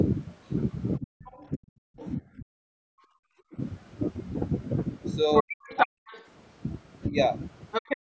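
From 0.99 to 1.62 s the speech is suppressed in double talk. It drops by as much as about 40 dB in broken pieces. The likely cause is an echo canceller that turned both sides down while they overlapped. From 1.25 to 2.08 s the other side's voice leaks through, about 20 dB below the speech. It sounds faint. From 2.19 to 3.58 s the speech is chopped down again, for well over half a second in total.

From 5.34 to 6.25 s the leak returns, now about as loud as the speech itself. Within it, from 5.4 to 6.01 s, the speech is suppressed hard. At 7.1 s there is a brief dip of about 5 dB. From 7.71 to 7.97 s leakage comes through at about 5 dB below the speech. From 7.81 s to the end the speech is cut out in pieces again, by up to about 40 dB. Across all of this, the band of the call's microphone path stops near 8 kHz.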